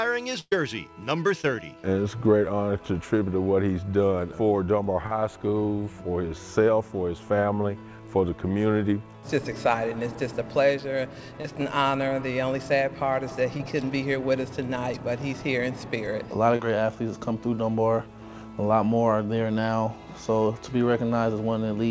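Audio arriving over a call link lost a run of packets at 0.41 to 0.52 s, about 100 ms of signal. This burst of packet loss was bridged by extending the last sound and fading it, so a held, dying tone or hiss replaces that stretch, with a brief silence before the audio resumes further on. Later, short concealed packet loss strikes at 1.41 s, 5.06 to 5.12 s, 11.42 to 11.45 s, 13.57 to 13.60 s and 16.56 to 16.60 s, each dropping 20 to 40 ms that the receiver patched with extrapolated signal, heard as a quick smear or wobble. Nothing reaches above 8 kHz, which fits the G.722 codec at 64 kbps on this call path.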